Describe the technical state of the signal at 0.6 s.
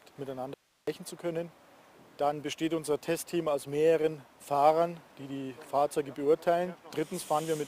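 At 0.6 s the signal path has likely lost its feed while the downstream chain stays live, an audio dropout to a faint residue from 0.54 to 0.87 s. For about 335 ms the sound cuts out abruptly, leaving only hiss roughly 40 dB below the normal level.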